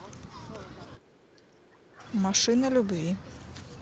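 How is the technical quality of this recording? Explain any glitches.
The recording has one clear glitch: a stretch where the speech is pulled down in level, heard through a call chain whose band stops at 8 kHz, which fits a wideband call codec.

From 0.96 to 2.04 s, the speech drops by roughly 15 dB at its deepest, over about a second. The likely cause is speech suppressed in double talk: with both ends talking at once, the echo canceller couldn't tell the local voice from loudspeaker echo and attenuated both. On a waveform, the envelope visibly shrinks across that span; on a spectrogram, the harmonics fade before recovering.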